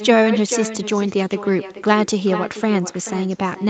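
Throughout this short speech recording, every phrase is trailed by a quieter, thinner copy of itself about four tenths of a second later, sitting roughly 11 dB below the direct speech. That is echo with no canceller: the far end played the call over a loudspeaker, its microphone picked the sound back up, and nothing removed it, so the speech returns after the network round trip. Above it all, nothing reaches past 8 kHz, as expected from the call codec's bandwidth.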